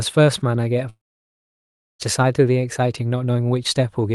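At 0.89 s the speech breaks off. A short, fading buzz continues the last sound, then near silence holds until 2.01 s. The gap lasts about 1.1 s. This is likely a long network dropout. The missing audio never returns. Playback simply resumes afterwards.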